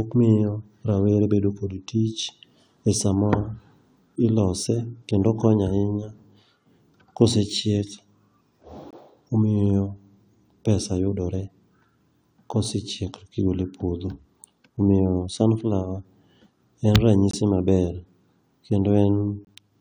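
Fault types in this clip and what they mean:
corrupt frame muted: the decoder rejected damaged compressed frames and silenced them, leaving abrupt 42 ms holes at 8.9, 17.3 and 19.4 s, with no concealment and timing intact.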